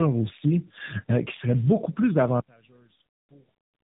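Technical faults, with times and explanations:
Throughout, tandem speech coding: the speech sounds rough, muffled and warbly, with nothing above 3.8 kHz. It was coded by two low-rate speech codecs in a row, the second working on the first's degraded output. This fits a G.729A to G.711 to AMR-NB 10.2 kbit/s chain.
2.40 to 3.92 s, one channel inverted: the speech abruptly falls by about 27 dB to a faint remnant and stays there to the end. The likely cause is one stereo channel reversing polarity, so the content shared by both channels cancels when summed to mono.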